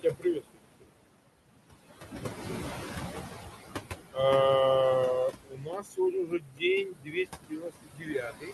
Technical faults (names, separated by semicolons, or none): noise suppressor artifacts; speech cut by the noise suppressor